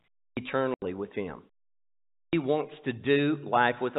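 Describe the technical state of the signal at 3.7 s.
At 3.7 s the audio is intact, with no fault present at that moment.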